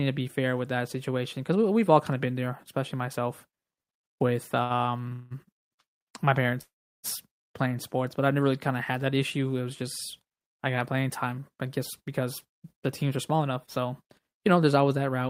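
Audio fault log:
4.63 to 5.65 s, repeated stalls (stutter): the speech catches five times in about a second, with roughly 345 ms of stretched-out filler in all and the longest wait about 179 ms. Packets were arriving late or too slowly, so the jitter buffer kept draining and the receiver carried the last sound on each time. Nothing's lost, but the line drags.
6.61 to 7.06 s, call audio freeze: the sound hangs for about 421 ms, fading out and then sitting silent for about 350 ms before resuming right where it stopped. That's likely packets held up in transit emptying the jitter buffer, leaving a gap rather than a loss.
12.00 to 14.78 s, jitter buffer speed-up: the speech runs at about 107% with the pitch unchanged, enough to sound hurried. The buffer had built up more audio than it wanted, so the receiver trimmed out short pitch-period slices over and over, somewhere around 200 ms in total.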